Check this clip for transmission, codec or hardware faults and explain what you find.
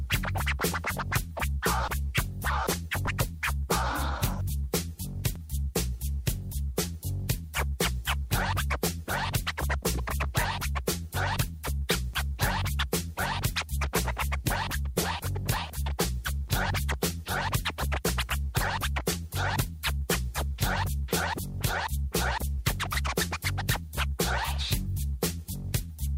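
Three faults are present, all of the same kind: a repeated buffer at 3.08 s, 5.36 s and 12.14 s. Each time, new audio failed to arrive in time, so a 5 ms buffer was played once more. A small piece sounds twice with a hard join, heard as a click or brief buzz, and roughly 5 ms of audio is lost. A waveform shows the identical 5 ms segment back to back with a step at each join. A spectrogram shows a thin vertical broadband line at each of the three times.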